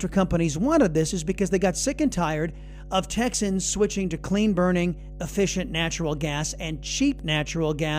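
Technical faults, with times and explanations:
Throughout, mains hum: a steady 50 Hz tone with low harmonics sits under the speech at roughly 15 dB below it. This points to a ground loop or nearby transformer coupling the power line into the signal path.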